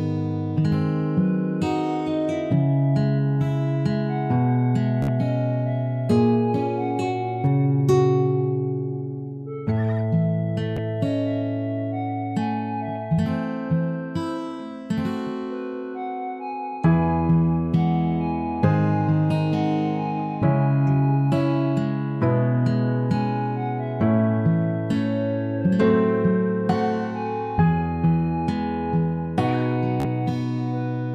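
Bluetooth stutter at 5.02–5.08 s, 10.77 s and 30.00–30.05 s: lost packets make a short slice repeat as a buzz, seen as identical repeating waveform blocks and vertical spectrogram striping.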